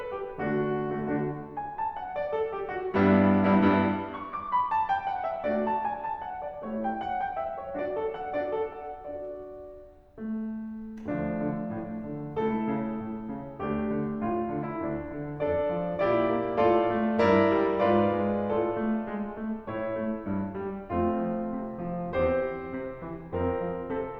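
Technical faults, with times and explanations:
No technical faults can be heard in this music.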